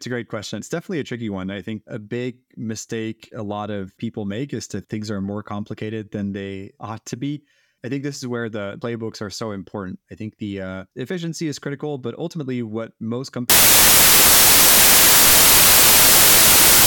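From 13.50 s to the end at 16.87 s, the speech collapses into loud, harsh broadband noise: samples built from the wrong bytes. The reader assembled each sample with misplaced or swapped bytes, so the noisy low bits became the dominant part. A spectrogram shows flat broadband fill, and the waveform becomes a dense block.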